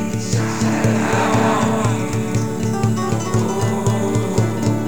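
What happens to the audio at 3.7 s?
At 3.7 s the doubled audio track is present, as it is for the whole clip: every sound is followed by a second, full-band copy roughly 300 ms later and about 5 dB quieter, with no decay or room colour. The likely cause is a slower second capture path mixed back in. On a spectrogram each event appears twice, an identical but fainter shape shifted right; the waveform shows repeated transients at that fixed spacing.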